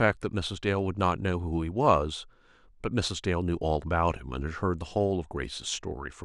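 No technical faults are audible.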